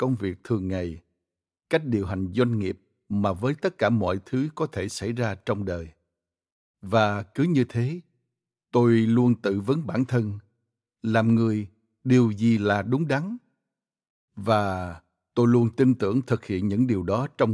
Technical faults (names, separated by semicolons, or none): none